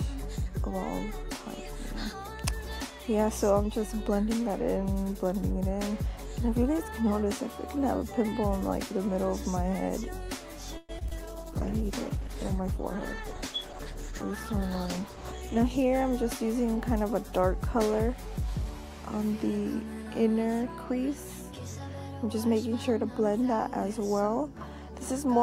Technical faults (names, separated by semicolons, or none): call audio freeze; short concealed packet loss; call bitrate drop; jitter buffer speed-up